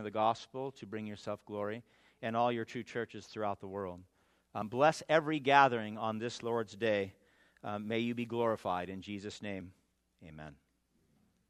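At 4.62 s and again at 9.61 s the audio jumps forward abruptly, each time dropping a very short slice, on the order of 15 ms, with the material on either side butted together and no gap of silence between. The two skips sit 5 s apart, which points to audio missing between chunks: the likely cause is a recorder or processor handling the signal in 5-second blocks and losing a few milliseconds at each block handover.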